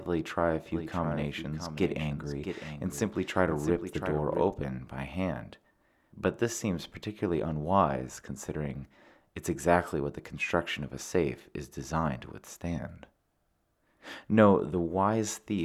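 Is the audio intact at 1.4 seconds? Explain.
No. A doubled audio track runs from 0.66 to 4.54 s. A second full-band copy trails the original by roughly 0.7 s, about 10 dB quieter. It has no decay or room colour. The likely cause is a slower second capture path.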